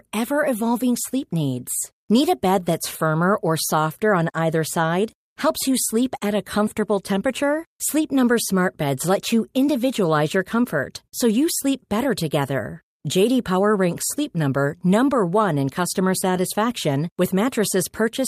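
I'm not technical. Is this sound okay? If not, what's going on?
Yes, I can't hear any technical problems here.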